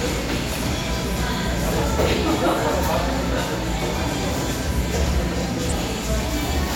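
At 5.69 to 5.74 s, a corrupt frame was decoded: flipped bits in the compressed data, spanning what sounds like a couple of frames, were played anyway. Misread codes and gains scatter energy at wrong frequencies, giving a brief, fairly loud glitch over the sound.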